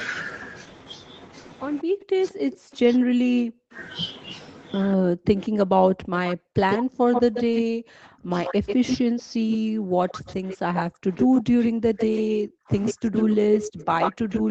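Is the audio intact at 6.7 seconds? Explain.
No. From 4.96 s to the end, the speech dips and breaks up, falling as much as around 40 dB, most likely speech suppressed in double talk, with the canceller attenuating both sides. From 6.27 to 7.62 s an echo leak adds a copy delayed by 137 ms and only slightly quieter than the speech, likely residual loudspeaker echo escaping cancellation.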